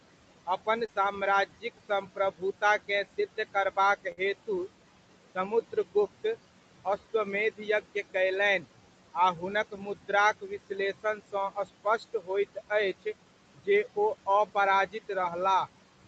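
Noise suppressor artifacts run through the whole recording. The suppressor pulls the steady background down by about 18 dB between phrases and lets it rise under speech. On a spectrogram, the noise floor pumps frame by frame, with speckled isolated bins instead of a smooth haze.

From 0.46 to 4.49 s, the suppressor also cuts speech, lowering roughly 0.7 s of it in scattered spots by up to about 17 dB. Soft consonants and word tails sound swallowed. On the spectrogram, faint fricative energy and decaying endings are clipped away, and the waveform envelope shows the same abrupt dips.

At 0.85 to 0.89 s comes a short concealed packet loss. About 30 ms never arrived, and the decoder filled 26 ms by extending the preceding sound before blending back. It is heard as a tiny smear or wobble. The spectrogram shows a brief smeared patch rather than a gap.

At 4.12 to 4.18 s, a burst of packet loss removes about 50 ms. 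Concealment stretches the last sound for 51 ms, fading it out, and the audio then resumes slightly further on. The waveform shows a repetitive, decaying stretch and the spectrogram a smeared, fading block.

The suppressor cuts speech again from 5.35 to 6.25 s, but lightly: roughly a tenth of a second drops by up to about 12 dB. From 6.85 to 15.10 s, about a second in total is lowered by up to about 16 dB, again thinning quiet syllables and endings into the background.

At 15.21 to 15.23 s, a second short concealed packet loss covers about 10 ms, with 11 ms synthesized. It produces only a brief smear within the 8 kHz band of the call.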